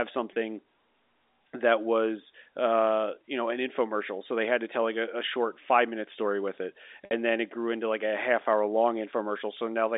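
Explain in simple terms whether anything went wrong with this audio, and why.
Packet loss with pitch repetition occurs twice: at 0.33 to 0.35 s, and at 7.05 to 7.11 s between "minute story with it" and "then it grew into". Chunks of sound (about 30 ms, then 60 ms) never arrived, so the receiver repeated the last vocal cycle to fill each gap, briefly stretching the sound.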